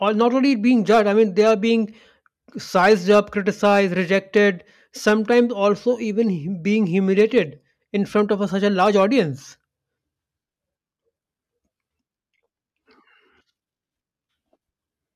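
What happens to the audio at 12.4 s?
Nothing goes wrong at 12.4 s; the speech plays through that moment cleanly, with no dropout, click, distortion or other disturbance.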